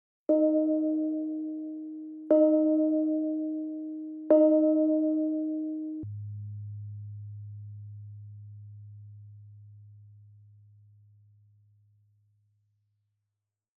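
From the start to 6.03 s the audio suffers a wrong sample rate fault: it runs three times too fast and about 19 semitones too high, which fits material captured at 16 kHz being played at 48 kHz without conversion. It sounds shrill and frantically hurried. On a spectrogram every feature is squeezed in time and shifted up threefold in frequency, with energy reaching 24 kHz instead of stopping near 8 kHz, then snapping back at 6.03 s.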